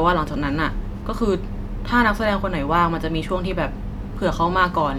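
Nothing in this bit of speech jumps out as a technical fault anywhere along the way, so there's really nothing to flag here.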